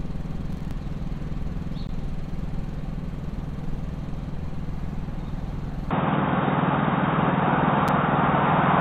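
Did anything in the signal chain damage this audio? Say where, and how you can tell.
Yes. At the driver or buffer stage, a burst of crackle runs from 0.43 to 0.71 s. Roughly ten buffers of about 5 ms each were skipped because the processor was overloaded. The waveform shows a cluster of hard-edged jumps, and the spectrogram shows a band of thin vertical broadband streaks.

At the network or playback stage, there are gaps between stream segments at 1.87 s (about 17 ms) and at 7.88 s (about 6 ms). Mismatched timestamps left holes that the player filled with silence, which fits segments of about 6 s. The waveform drops flat to silence with sharp edges, and the spectrogram shows a thin blank column.

From 5.91 s to the end, the sound turns dull. Nothing is present above 3.8 kHz, the level shifts by about 5 dB, and a new noise floor about 45 dB down appears with no silence at the join. The likely cause is the input switching to a poorer device. 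On the spectrogram, the upper band abruptly empties.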